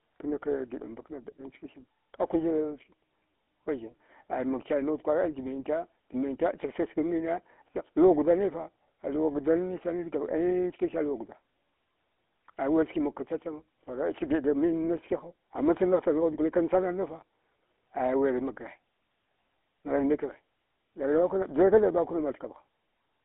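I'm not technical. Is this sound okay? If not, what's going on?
No. From start to finish the speech has passed through the GSM full-rate codec, the system early mobile phones used to squeeze voices down. It rebuilds the voice from a simple model driven by a regular train of pulses, which gives the buzzy, gravelly roughness you can plainly hear. Nothing above about 3.8 kHz survives, so it also sounds thin. A plain phone line would sound just as thin but smooth. The grainy buzz is what marks this codec.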